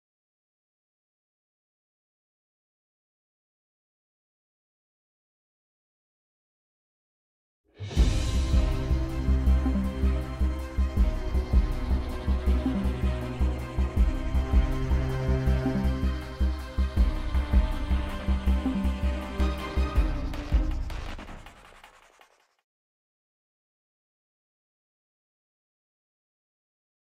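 No technical fault can be heard anywhere in this audio; the signal holds steady throughout, with no dropouts, distortion, level jumps or timing disturbances.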